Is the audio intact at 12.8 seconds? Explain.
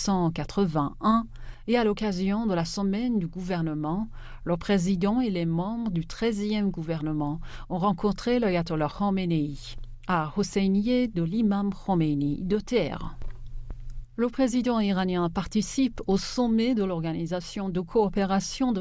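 Yes, at 12.8 seconds the audio is intact, with no dropout, click, distortion or other technical fault to be heard at that moment.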